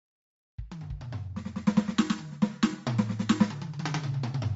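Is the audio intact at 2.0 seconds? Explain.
No. Bluetooth LC3 compression runs throughout this music, likely. Nothing sounds above about 7.7 kHz, and noise-filled upper bands leave a grainy, breathy edge.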